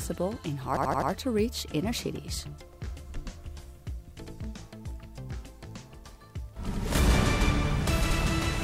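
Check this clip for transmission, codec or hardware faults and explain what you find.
Four stutters are present, all from a repeated buffer. At 0.77 to 1.11 s a short piece of about 85 ms sounds five times with a hard join at each repeat. Single repeats follow at 2.73, 4.27 and 6.74 s. New audio arrived late, so the device replayed its last buffer, which fits a 4096-sample buffer.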